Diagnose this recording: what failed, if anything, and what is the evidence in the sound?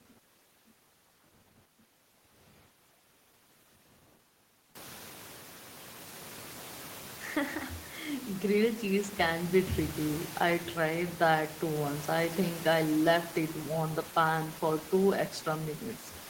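Nothing failed anywhere in the chain; the only thing worth noting is the room's own background noise, which climbs by about 19 dB around five seconds in and then sits about 19 dB under the speech, and that belongs to the recording space rather than to any stage of the system.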